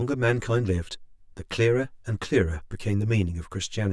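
Throughout, one channel lags about 10 ms before mono summing. This channel delay (comb filtering) notches the spectrum from around 50 Hz, leaving the speech hollow.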